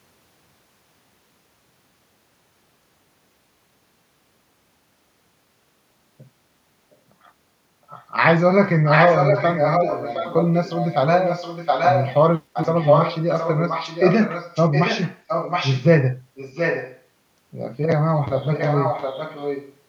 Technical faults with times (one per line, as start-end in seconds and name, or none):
7.98-8.06 echo leak
8.85-12.13 echo leak
12.53-15.86 echo leak
16.35-17.02 echo leak
18.36-19.76 echo leak